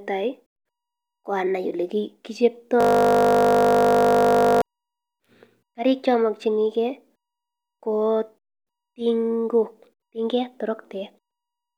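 From 2.81 to 4.62 s the speech freezes into a system hang loop: the playback hardware kept recycling one 20 ms slice about ninety times, producing a steady 50 Hz buzz. Unlike a stutter or dropout, the repetition is exact and gapless.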